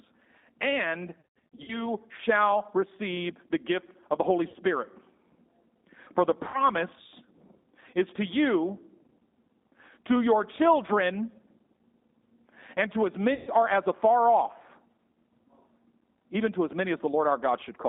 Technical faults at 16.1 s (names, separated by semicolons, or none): G.729 codec